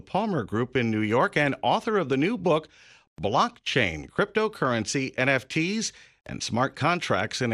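Throughout the speech, MP2 compression likely starved the upper sub-bands of bits, consistent with a rate around 80 kbps, leaving the voice dull, with gurgling, granular distortion.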